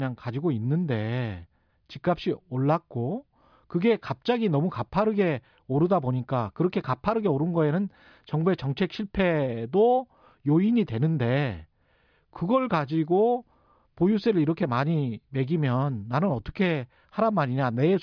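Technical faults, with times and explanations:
No technical faults can be heard anywhere in this speech recording. There is nothing to time or explain.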